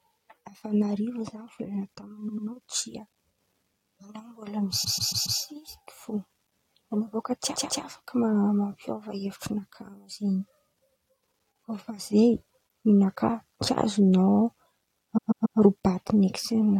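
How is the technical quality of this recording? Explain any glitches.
The recording has four stutters caused by repeated frames. A short stretch of compressed frames was played again several times in a row, so the decoder repeats the same slice of speech and the audio runs longer. At 2.28 to 2.46 s a block of about 93 ms plays twice extra. Blocks of about 139 ms repeat four times at 4.83 to 5.39 s, twice at 7.55 to 7.83 s, and three times at 15.17 to 15.58 s.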